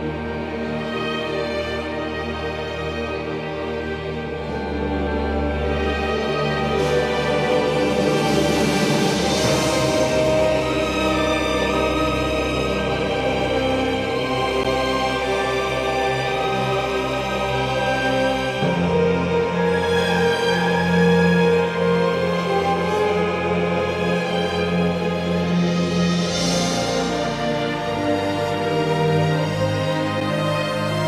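At 14.64 s, a block of digital silence lasting 11.6 ms, which fits an unfilled 512-sample buffer, gives a tick; the waveform shows a flat gap, the spectrogram two broadband edge lines.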